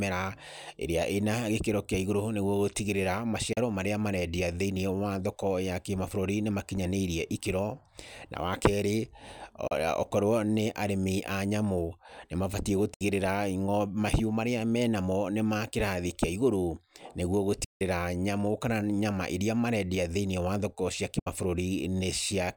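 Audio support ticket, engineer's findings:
Digital broadcast dropout, receiver muting after lost or corrupt frames; the sound fades out over about 8 ms and returns. Holes at 3.53 s (before "marĩa marendia"), 9.67 s, 12.94 s, 17.64 s (before "nyamu kana nyama iria"), 21.19 s (after "thĩiniĩ wa thoko cia"). Gaps of 32, 32, 64, 160 and 64 ms fit whole 32 ms frames. Lost audio is not recovered.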